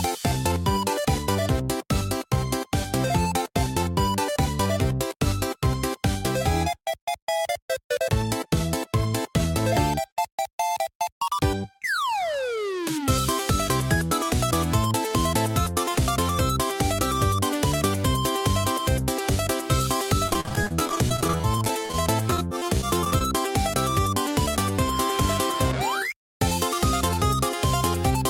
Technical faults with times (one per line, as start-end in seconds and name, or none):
20.27-21.94 repeated packet loss (robotic sound)
22.30-23.21 repeated packet loss (robotic sound)